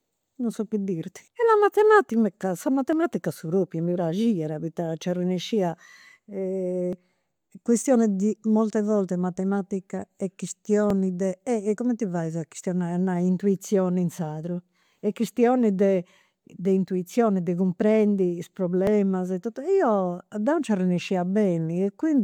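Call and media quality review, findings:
Overlap between stream segments at 2.93 s, 6.93 s, 10.90–10.92 s and 18.87 s. Brief clicks or micro-skips in the speech, spaced at multiples of 4 s, matching the segment length. Probable component: the segmenter or the player's stitching logic. Adjacent segment timestamps overlap, so the player trims audio that wasn't actually duplicated. A few milliseconds disappear each time, about 20 ms at 10.9 s, and the waveform jumps at the splice.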